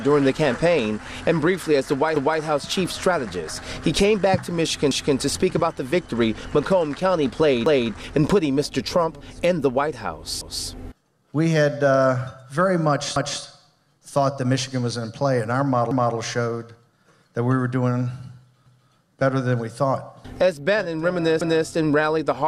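Overlapping chunks: a 250 ms stretch of audio replays at 2.16, 4.91, 7.66, 10.41, 13.16, 15.91, 18.66 and 21.41 s, as each 2.5 s chunk starts before the last finishes.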